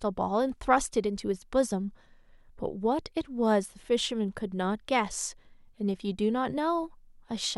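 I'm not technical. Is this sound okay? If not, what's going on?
Yes, this sound is okay, and there's nothing going on with it that needs fixing.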